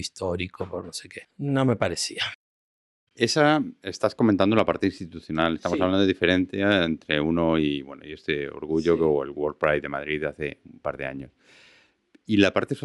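No technical faults can be heard anywhere in the recording; the signal stays continuous and steady throughout.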